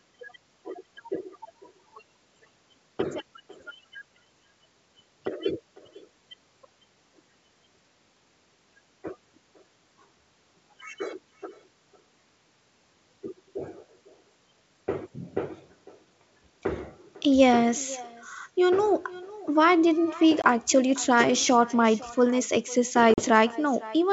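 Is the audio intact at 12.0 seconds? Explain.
No. At 12.0 seconds, as throughout the clip, the speech is trailed by a quieter, thinner copy about half a second later, around 21 dB down. This is echo with no canceller: the far end's loudspeaker leaks into its microphone and returns over the wideband G.722 call.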